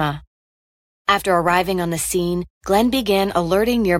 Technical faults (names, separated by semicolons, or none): none